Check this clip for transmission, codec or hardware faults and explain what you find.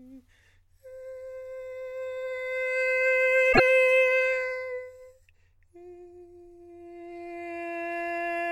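One fault is audible in the music. From 3.49 to 3.60 s there is damaged data in the compressed stream. It lasts about 0.11 s. A short stretch of the encoded data is corrupt, so the decoder cannot read those frames properly. It loses sync and searches for the next valid frame header before playback recovers. The result is a brief chirp, squawk, click or short hole that cuts across the music.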